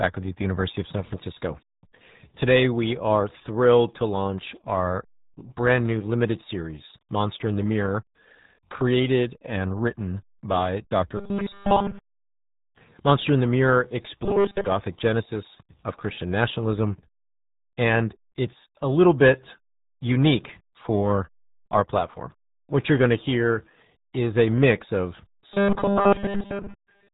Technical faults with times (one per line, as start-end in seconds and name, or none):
0.00-27.13 RealAudio 14.4 codec